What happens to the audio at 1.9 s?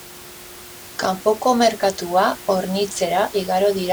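At 1.9 s the speech comes through intact, with only the room's own background noise audible about 19 dB below it.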